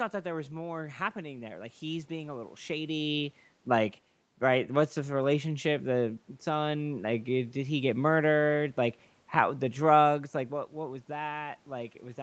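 Nothing stood out on listening to this speech recording that would point to a problem in how it was captured or transmitted.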